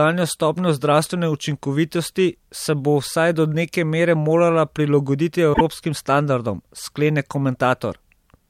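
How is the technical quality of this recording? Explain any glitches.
One glitch affects the recording. From 5.50 to 5.61 s, damaged data in the compressed stream makes the decoder misread frames and hunt for sync, producing a brief disturbance.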